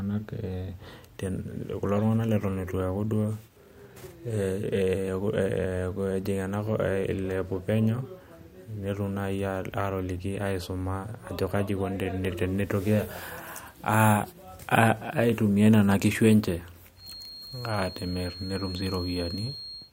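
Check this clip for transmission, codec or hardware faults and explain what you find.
One fault appears in the final three seconds of the speech. From 16.94 s to 19.93 s there is a feedback whistle, likely from a loudspeaker-to-microphone loop hovering at its feedback threshold. This sustains a thin, steady 4.3 kHz tone about 15 dB below the speech, swelling and fading slowly in level.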